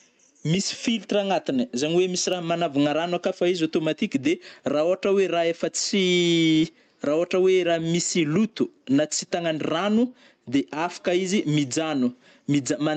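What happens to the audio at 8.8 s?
Gain pumping runs through the whole recording, including 8.8 s. The gain ducks by about 10 dB under every loud syllable, squashing the speech, likely from input gain set far too high with a fast limiter clamping it down.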